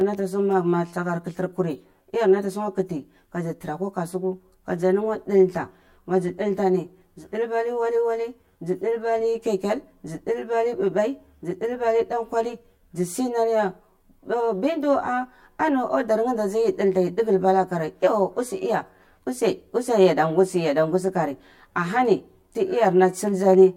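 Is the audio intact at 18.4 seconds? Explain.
No. At 18.4 seconds the speech has channel delay (comb filtering), present throughout the clip. One channel lags the other by around 10 ms. Summed to mono, they cancel at evenly spaced frequencies from roughly 50 Hz upward. The speech sounds hollow and phasey.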